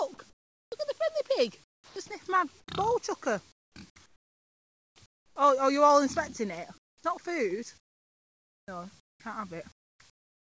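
Comfort noise in place of the background, at 0.30–0.72 s, 1.64–2.68 s, 3.52–5.36 s, 6.78–7.04 s and from 9.72 s to the end: in these pauses the real background gives way to a steady, featureless hiss. The likely cause is discontinuous transmission. The sender stops sending when it detects no active sound, and the receiver synthesises noise roughly matched to the background. The fill is about 17 dB quieter than the real background at the first gap and about 15 dB quieter at 6.78 s, so the room seems to dip and flatten at those points.

Sound dropped by the voice detector, at 2.08 s: inside the second comfort-noise stretch, about 10 ms of real sound vanishes into a 20 ms patch of synthetic noise. The detector most likely judged that faint moment to be background and withheld it. The result is a tiny gap in the sound, filled with the same even hiss before it continues.

Onset clipped by the voice detector, at 7.00–7.04 s: the sound returning after the 6.78 s pause starts abruptly, without its soft beginning. 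The first 40 ms were never sent, most likely because the detector reacted late to the restart, and comfort noise covers that slice. The sound seems to snap on instead of rising naturally.

Sound chopped by the voice detector, at 7.78–9.20 s: over this stretch, with the call path's bandwidth topping out at 8 kHz, consistent with G.722 at 64 kbps, the detector likely toggled between sending and muting more than once. About 1.1 s in total was replaced with synthetic fill. Quieter edges drop out, which gives the passage a choppy, stuttering quality.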